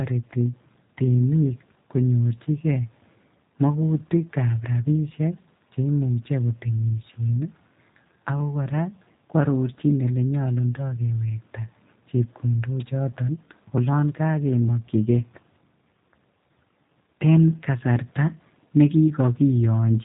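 Right through the speech there's G.729 coding damage, plainly audible: nothing above about 3.8 kHz, and a rough, synthetic pulse-built texture that fits an 8 kbit/s stream.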